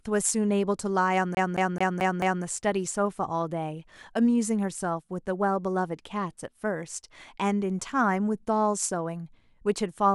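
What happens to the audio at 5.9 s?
Nothing goes wrong at 5.9 s; the speech plays through that moment intact.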